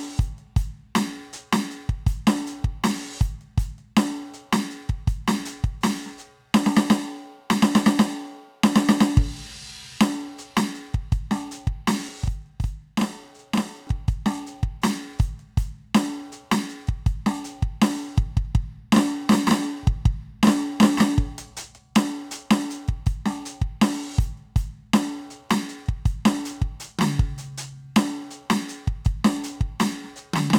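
From 12.09 s to 13.87 s the music picks up a channel delay (doubling): one channel arrives 40 ms behind the other, and when the two are folded to mono the late copy stands apart as a second, equally loud attack just behind each onset. That gap is long enough to hear as a separate slap rather than a tonal coloration, which distinguishes it from the hollow, phasey comb filtering that a delay of a millisecond or two would produce. There is also no decaying tail, so it is not reverb.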